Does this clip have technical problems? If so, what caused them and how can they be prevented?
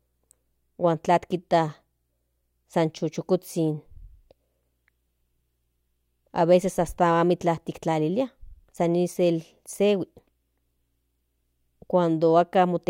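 No, there are no technical problems in this recording.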